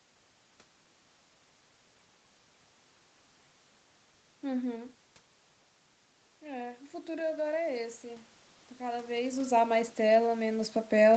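A speech clip with one fault, automatic gain rising. From 6.39 s to the end, the input drops by about 12 dB. The gain control slowly raises its gain, so voice and background swell together.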